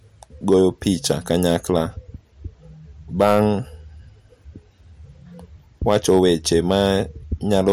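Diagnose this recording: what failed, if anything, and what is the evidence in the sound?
What failed here is hard clipping, in four bursts: 0.52 to 1.80 s, 3.21 to 3.45 s, 5.88 to 6.91 s and 7.53 to 7.72 s. The speech was pushed past what a stage could pass, most plausibly the converter or a fixed-point format conversion, by about 3, 6, 4 and 3 dB. The peaks get sliced flat, and those squared tops spray harmonics up high, so you hear a harsh, crackly fuzz on the loud syllables, roughest in the short 3.2 s burst.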